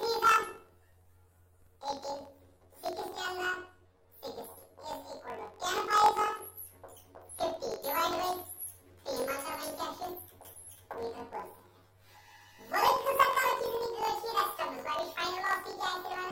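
Throughout the clip, planar audio is being read as interleaved. Each 21.77 ms block plays twice at double speed, so the sound is an octave high with a rough 45.9 Hz buzz. A spectrogram shows upshifted harmonics crossed by regular vertical striations at that block rate.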